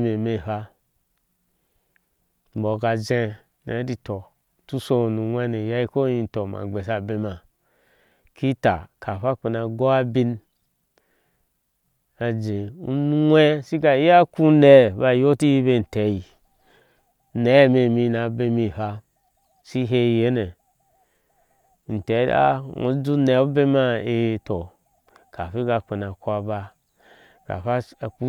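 No technical faults can be heard anywhere in the recording.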